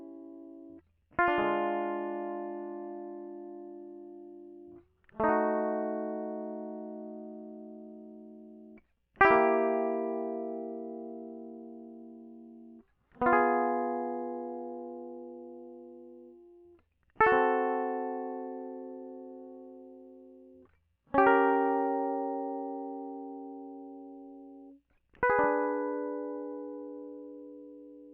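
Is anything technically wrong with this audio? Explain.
No, the music comes through as a steady, intact signal with no audible technical faults anywhere in the clip.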